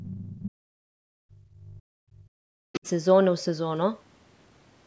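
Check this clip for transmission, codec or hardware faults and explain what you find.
Two echo-canceller problems affect this speech clip, both from a call in which the other party is played over a loudspeaker.

Other side's voice leaking through, from 0.00 to 0.42 s and again from 2.73 to 2.80 s. A second, fainter voice sits under the talker, about 20 dB down at the start and about 25 dB down in the brief later scrap. This is likely residual echo: the canceller failed to subtract all of the loudspeaker sound picked up by the microphone. On a spectrogram it shows as weak, separate harmonic striations beneath the main speech. On the waveform it appears as low-level activity where the talker's envelope alone would not explain it.

Speech suppressed in double talk, from 0.40 to 2.86 s. While both parties are talking, the talker's level falls, sinking as much as about 40 dB at the deepest point, over around two seconds in total. 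The canceller likely could not separate the talker's voice from the loudspeaker echo, so it turned everything down. On the waveform the envelope shows sudden notches and collapsed stretches. On a spectrogram the energy thins into gaps. The band still stops at 8 kHz throughout.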